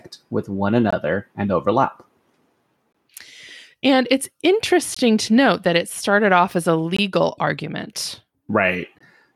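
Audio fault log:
0.91–0.93, 2.93–2.95, 4.95–4.97, 6.97–6.99, 8.99–9.01 s, gap between chunks: hard-edged 20 ms silences every 2.0 s, the first between "with one" and "and overlap". Each join between 2-second chunks leaves a hole.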